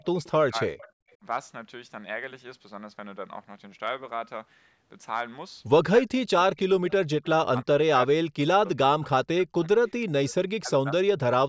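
Speech that dips sharply or breaks into fragments from 0.00 to 0.76 s, briefly at 1.18 to 1.25 s, through much of 6.0 to 9.73 s and again at 10.61 to 11.15 s, dropping by as much as about 40 dB in the longest stretch. This is most likely speech suppressed in double talk, where an echo canceller, unable to tell the near talker from loudspeaker echo while both sides spoke, pulled the level down. Faint delayed copies of the voice also surface at 0.25 to 0.3 s (312 ms late), 0.78 to 1.13 s (356 ms) and 9.65 to 9.91 s (387 ms), sitting about 25 to 30 dB below the speech. That is an echo leak: a loudspeaker's sound reached the far microphone and was likely sent back because cancellation left part of it behind.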